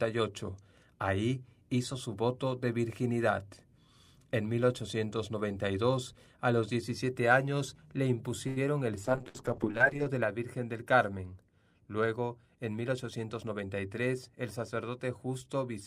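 Speech with four network faults. A short stall from a late packet hits at 8.47 to 8.59 s, just after "años le": the jitter buffer ran dry, so the last sound is held and stretched for about 90 ms until the packet arrived. Playback then resumes from the same point with nothing lost, but everything after it sits later. A call bitrate drop follows at 9.05 to 10.18 s, when the bandwidth estimate fell and the encoder went from 64 to 8 kbps, staying at the lowest rate for 1.05 s. The audio turns coarse and muffled, with the highs cut off, until the rate recovers. Inside that stretch, a burst of packet loss at 9.28 to 9.37 s replaces the missing audio with about 58 ms of concealment, a continuation of the last sound that fades as it goes. When playback resumes, about 60 ms of the original is simply gone. A jitter buffer speed-up runs from 12.92 to 13.63 s, where the receiver had buffered more audio than its target and trimmed short pitch-period pieces repeatedly. 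Around a tenth of a second is removed, and the speech plays about 12% fast at unchanged pitch, sounding hurried.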